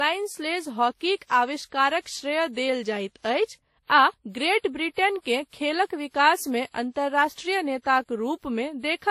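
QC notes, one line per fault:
Throughout: transcoding between lossy codecs. The speech has nothing above 15.2 kHz and carries the artefacts of both codecs heard together, likely from WMA at 48 kbit/s re-encoded as Vorbis at 39 kbit/s.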